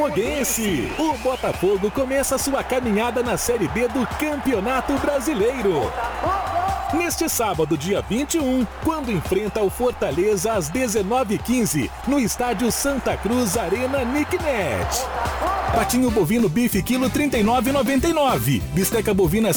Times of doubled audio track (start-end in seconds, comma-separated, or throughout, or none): none